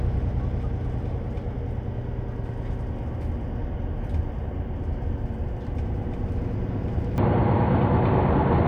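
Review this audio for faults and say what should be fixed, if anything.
At 7.18 s the audio turns dull and band-limited through to the end, with nothing above 4.5 kHz, a level shift of a few decibels and a faint new noise floor, with no gap at the change. This is likely an input switched to a poorer device mid-recording. Lock the capture device and disable automatic input or headset-profile switching before recording.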